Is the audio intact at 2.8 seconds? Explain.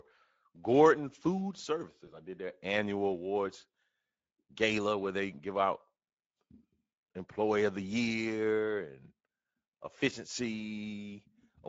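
No. At 2.8 seconds the Speex codec damage is plainly audible and runs through the whole clip. Its CELP coder has too few bits for the excitation, which fits a rate near 16.8 kbps, so the speech sounds noisy and hoarse. A spectrogram shows smeared, grainy harmonics.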